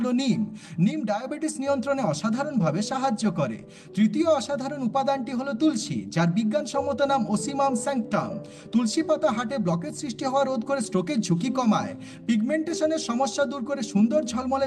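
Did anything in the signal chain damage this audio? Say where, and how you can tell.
No, nothing in the chain from capture to playback has left an audible mark on this audio. There are no dropouts, distortion, glitches or level jumps at any point in the recording.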